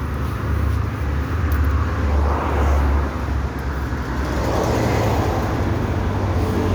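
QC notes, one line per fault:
No faults found.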